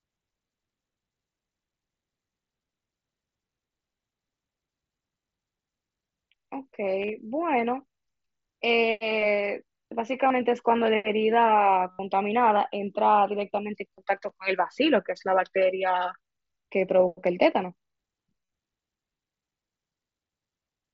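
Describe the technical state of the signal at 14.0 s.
At 13.97 s there is concealed Bluetooth headset packet loss: a few short voice packets from the headset never arrived, and the receiver filled each gap by repeating the best-matching stretch of the preceding waveform. About 22.5 ms in total is patched, scattered across roughly 60 ms, with no gap longer than 7.5 ms, which fits about three lost frames. It is nearly hidden. On a waveform the repeated cycles look suspiciously periodic; on a spectrogram, brief smeared harmonic slivers sit within the mSBC band, which tops out at 8 kHz.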